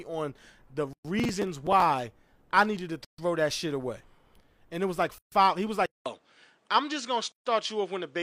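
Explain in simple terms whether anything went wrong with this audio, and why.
Several things went wrong in this speech recording.

First, there are gaps at the joins of encoded pieces. Brief holes of silence, about 0.12 to 0.14 seconds long, cut into the speech at 0.93, 3.05, 5.18 and 7.32 seconds, about two seconds apart. The recording was compressed in two-second chunks and glued back together without trimming. Each chunk carries a little dead air at its start and padding at its end, so every join leaves a pause before the speech resumes where it left off.

Second, from 1.19 to 1.82 seconds there is processor overload crackle, a gritty tearing laid over the speech. The computer handling the audio fell behind and kept missing its deadlines for tiny slices of sound. The size of the grain points to slices of about 5 milliseconds, with a dozen or more missed. Each miss replays a scrap of old audio, and the repeated hard edges sound like crackle until the overload passes.

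Third, at 5.86 seconds the sound drops out for about 0.2 seconds and comes back duller, with nothing above 9.8 kHz, and stays that way to the end. The loudness barely changes, and the new device's faint background noise sits well below the speech. This is likely an input switched to a poorer device, such as a different microphone or a headset's call mode, which cannot pass the highest frequencies.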